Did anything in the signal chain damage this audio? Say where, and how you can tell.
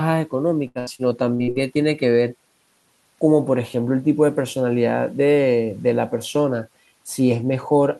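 Yes. From 0.67 to 1.58 s the speech turns choppy and robotic, with small pieces audibly missing. This is repeated packet loss (robotic sound) at the network stage. About six holes open in under a second, the longest around 77 ms. The receiver patches each one by extending the last sound it had, so roughly a third of that stretch is synthesized filler rather than real signal.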